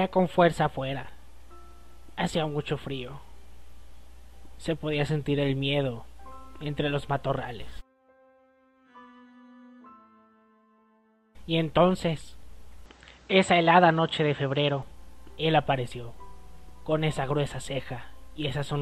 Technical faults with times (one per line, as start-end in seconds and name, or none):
12.86-14.83 input switched to a poorer device